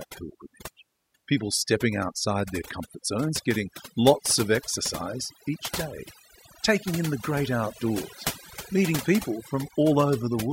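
Right from the start and all the way through, you can hear overdone noise removal at work. Someone pushed the denoiser too hard, so any frequency band sitting close to what it thought was noise got pulled way down or shut off, and the softer parts of the speech got caught up too. The gaps drop to near silence with little twinkly specks left behind.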